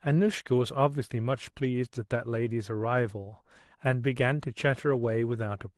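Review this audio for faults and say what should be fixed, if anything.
Nothing to fix: no faults in the speech, and the call-codec path sounds as expected, with the top end stopping around 12 kHz.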